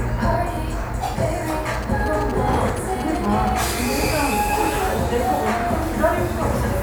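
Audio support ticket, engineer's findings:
GSM signalling bursts, 1.74–3.49 s: galloping ticks and short 217 Hz buzzes, roughly 15 dB below signal. Nearby 2G phone signalling, rectified in audio circuit. Spectrogram shows clustered vertical stripes.

GSM phone buzz, 3.61–5.14 s: steady raspy 217 Hz buzz, about 22 dB down. Phone in active call, bursts rectified. Spectrogram shows harmonic lines spaced 217 Hz; waveform shows a regular pulse train.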